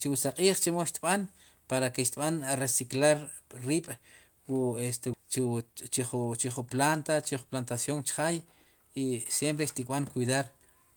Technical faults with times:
5.13-5.15 skip ahead
5.17-8.53 jitter buffer speed-up

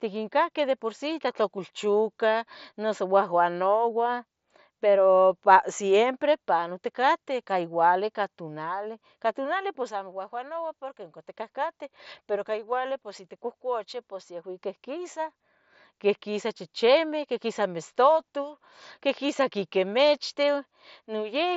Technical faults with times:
none

